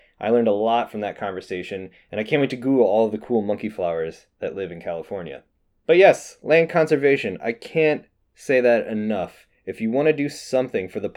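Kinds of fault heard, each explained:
No technical faults can be heard in this speech recording. There is nothing to list here, as no kind of fault turns up anywhere in the audio.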